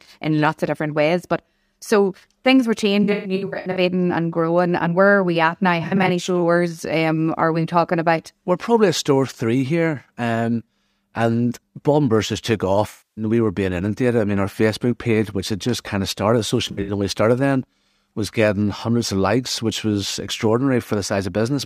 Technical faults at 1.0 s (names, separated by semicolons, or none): none